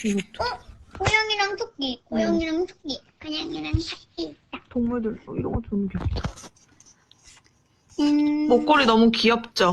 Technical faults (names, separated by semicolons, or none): call bitrate drop